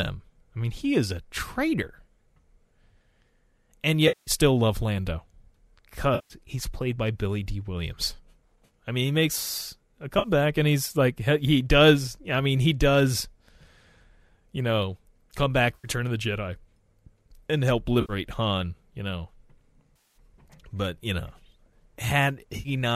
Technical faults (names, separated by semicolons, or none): AAC frame loss with concealment